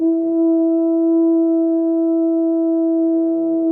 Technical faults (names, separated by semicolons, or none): repeated stalls (stutter)